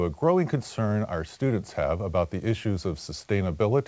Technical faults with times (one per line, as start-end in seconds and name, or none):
none